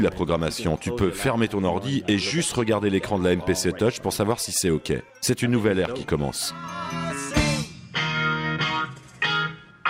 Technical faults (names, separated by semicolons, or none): none